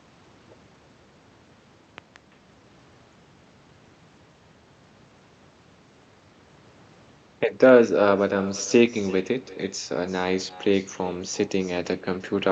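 From the first second to the end, the speech carries an echo with no canceller. Someone on the far end is evidently listening on a loudspeaker, their microphone hears it, and nothing strips it out, so every phrase comes back around 300 ms later. The return sits about 20 dB under the direct voice, quiet, and it sounds thinner, like a faint shadow trailing the talker through the whole clip.

Then, between 1.98 and 2.18 s, there's a loud pop, actually two sharp hits in quick succession, peaking a few dB above the speech while the voice carries on underneath. That pairing is what you get when a sudden voltage step gets into the chain and the downstream circuitry shapes it. A likely culprit is a plug being seated, a switch, a static discharge or a driver hiccup.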